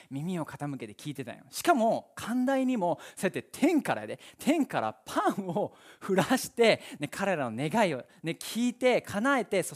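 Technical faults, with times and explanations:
No technical faults can be heard in this speech.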